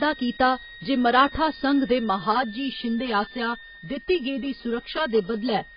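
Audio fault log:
throughout, switching supply whistle: A high, steady-ish tone sits under the speech at about 20 dB below it. Its pitch wanders between 1.78 and 1.9 kHz rather than holding one exact frequency. This is the sound of a switching power supply cycling in an audible burst mode, or of two supplies beating against each other, with the tone leaking into the audio path. Small load changes nudge its frequency within that range.
throughout, AAC compression: The speech is dull and smeared, with nothing above 5.1 kHz, and the coding damage is heavy enough to give sibilants and sustained vowels a warbling, fizzy texture. The likely cause is low-bitrate AAC-LC coding, around 16 kbps. The encoder works frame by frame against a hearing model. To save bits it pulls the cut-off down, leaves gaps in the spectrum and patches some bands with substitute noise.
2.32 to 5.77 s, channel delay (comb filtering): Right after "जे मराठा संघ दे", the speech turns hollow and phasey through to the end. 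One channel arrives about 5 ms late, and the two are summed to mono. Whatever is common to both cancels at evenly spaced frequencies, starting near 100 Hz and repeating about every 200 Hz. The result is a fixed comb of notches cut through the voice.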